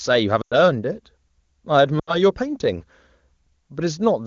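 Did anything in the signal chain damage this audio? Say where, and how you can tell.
Yes, at the network stage: lost AMR speech frames, twice. From 0.42 to 0.54 s the speech drops to near silence within a couple of frames, which fits about 100 ms of missing frames. From 1.99 to 2.16 s a shorter dropout fits about 80 ms. Radio errors failed the frame checksums, so the decoder repeated the last good pitch and vocal-tract parameters at falling gain. The wideband codec itself, apparently at its top rate, sounds clean.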